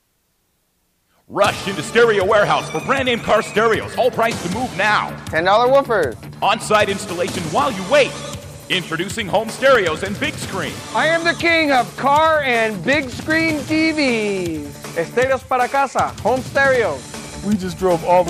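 A short burst of loose connector crackle runs from 3.22 to 3.31 s, just under a tenth of a second of irregular scratching laid over the audio. It comes from a worn or dirty contact somewhere in the signal chain making and breaking as it shifts, so the signal is chopped into fragments. Any DC present on the line turns each break into a pop. Reseating or cleaning the connector would address it.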